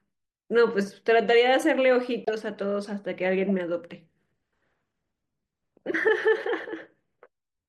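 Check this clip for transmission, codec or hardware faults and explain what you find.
A short run of damaged frames got decoded anyway, so you hear a corrupt frame decoded fault three times. Around 2.25 to 2.33 s there's a loud glitch, peaking near -15 dBFS and spanning what sounds like several frames. A quieter glitch follows at 3.49 s and another at 6.49 s. In each case, flipped bits scrambled gains or codes and pushed energy into the wrong frequencies.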